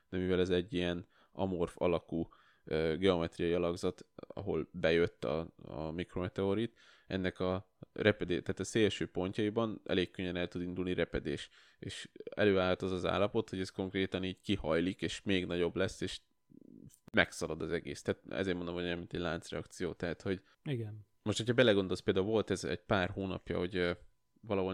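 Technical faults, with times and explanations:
17.08–17.14 s, gap at a join of encoded pieces: the speech drops into a gap of about 55 ms and picks up at "az egész" right where it left off. Two separately encoded chunks were butted together untrimmed, so the encoder's start-up delay and last-frame padding both stayed in.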